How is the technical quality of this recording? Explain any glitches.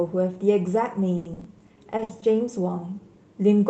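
The speech carries one stretch of damage, heard through a call codec, likely Opus at a low bitrate, whose top end stops near 8 kHz.

From 1.17 to 2.24 s, repeated packet loss (robotic sound): gaps up to 80 ms, about 310 ms stretched to cover them, giving choppy stutter rather than one clean dropout.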